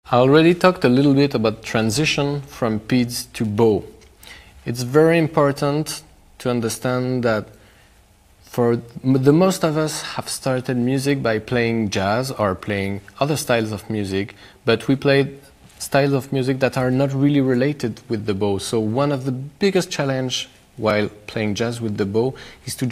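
At 18.20 s and again at 20.90 s, the audio drops to a block of digital silence, about 1.45 ms and then 2.9 ms long, which fits buffers of 64 and 128 samples left unfilled. Each is heard as a tick or dip. The waveform shows a near-flat line with abrupt edges, and the spectrogram shows a thin vertical stripe of broadband energy.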